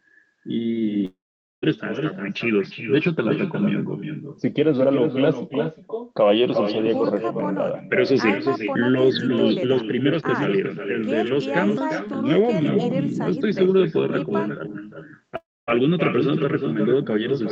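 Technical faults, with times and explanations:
Throughout, echo with no canceller: every phrase is shadowed roughly four tenths of a second later by a copy about 6 dB quieter and thinner. The far end's loudspeaker is feeding its microphone, and nothing subtracts that before it returns.
1.05–1.64 s and 15.36–15.83 s, long network dropout: the sound smears into a fading buzz or hiss, then goes silent for about 0.45 s and 0.24 s respectively. It resumes with about 0.58 s and 0.32 s missing, likely because packets never arrived and the receiver concealed the gap.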